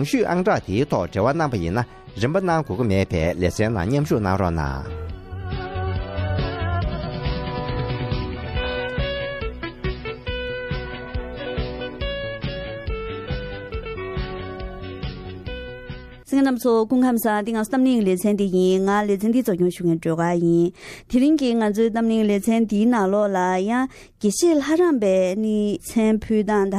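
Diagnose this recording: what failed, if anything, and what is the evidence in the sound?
Codec pre-echo at 24.19 s: hiss about 13 dB up leads the attack, because long blocks never switched short; spectrogram shows haze before the onset.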